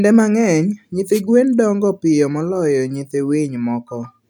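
At 1.11 s a wireless microphone noise hit cuts across the speech for about 0.1 s, just before "gwen dongo piyo moloyo". The FM radio link briefly fades, so receiver hiss swells into a swish of static. This differs from a digital dropout, which falls silent instead.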